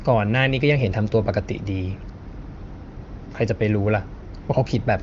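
Nothing here is technically wrong with the speech, which comes across as ordinary wideband phone audio through the AMR wideband (HD Voice) codec at 23.05 kbit/s, with its top end stopping around 7.6 kHz as that codec's bandwidth allows.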